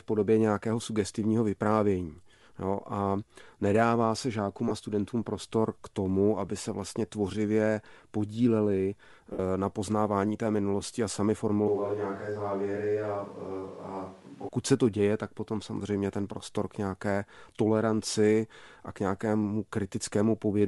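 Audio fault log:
throughout: Bluetooth LC3 compression. The speech has a breathy, grainy edge, with a hissy texture in the upper frequencies instead of clean detail, plainly audible across the whole clip. This is likely the LE Audio LC3 codec at a low bitrate, which fits about 48 kbps with 7.5 ms frames. At that rate the encoder discards much of the upper spectrum and fills the gap with synthetic noise, which gives the sibilance and brightness a sandy, smeared quality.
4.68–4.71 s and 9.33–9.39 s: lost LE Audio frames. Each is a brief noisy smear where the speech blurs into a hiss-like wash instead of dropping out cleanly. The first lasts about 28 ms and the second about 66 ms. The second is noticeably longer and audibly fades as it goes. The decoder repeated the last spectrum with random signs to conceal the missing frames. The gaps fit about three and eight 7.5 ms frames, and the longer gap is where the fade-down begins.
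11.68–14.49 s: switch to a distant microphone. The speech suddenly turns roomy and hollow, with thinner bass and a level about 5 dB lower. Room noise becomes more noticeable, sitting at around 30 dB below the speech. At 14.49 s it snaps back to the close sound just as abruptly. The likely cause is that the close microphone's signal dropped out and a microphone further from the speaker, such as a camera's, filled in for those seconds.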